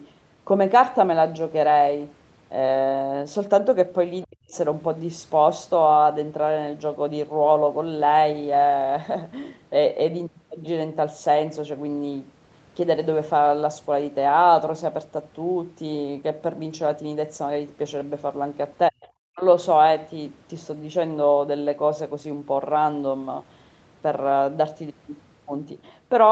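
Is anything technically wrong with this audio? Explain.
Yes. Speech suppressed in double talk at 4.24–4.55 s, 18.9–18.99 s and 19.31–19.44 s: the speech drops very deeply, nearly vanishing, likely because an echo canceller could not separate the talker from overlapping far-end echo and attenuated both.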